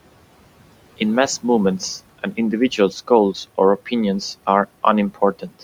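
Speech cut by the noise suppressor appears from 5.39 s to 5.63 s, right at the end of the clip. The suppressor misjudged the tail of the speech as background and turned it down along with the room noise, which sits about 20 dB below the speech. The deepest drop is about 14 dB, and the affected parts add up to around a tenth of a second, so the final sounds come out swallowed and faint.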